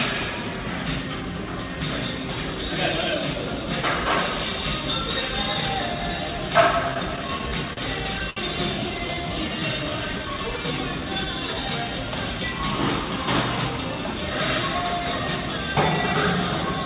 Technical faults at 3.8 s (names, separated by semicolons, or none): none